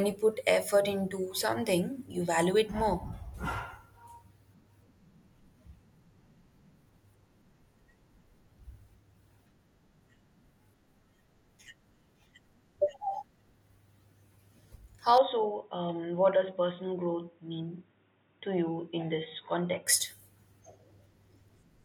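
From 15.18 to 19.87 s the speech turns dull and boxy, cut off above 3.8 kHz, slightly quieter and over faint new background noise, likely an input switched to a poorer device.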